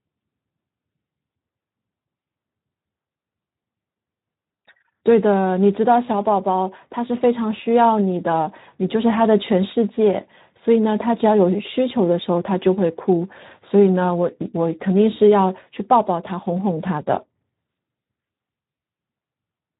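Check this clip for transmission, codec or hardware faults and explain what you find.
The clip has one codec fault, present throughout. Speex codec, throughout: the CELP coder's thin excitation budget, consistent with about 11 kbps, leaves speech plainly hoarse and noisy.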